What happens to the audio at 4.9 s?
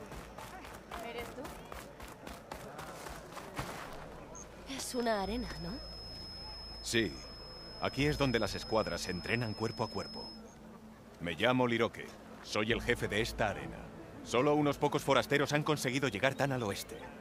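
At 4.9 s a feedback whistle is present, running from 4.78 s to 10.44 s: a thin, steady tone near 5.2 kHz, about 15 dB below the sound, swelling and fading slowly in level. The likely cause is a loudspeaker-to-microphone loop held just short of runaway feedback.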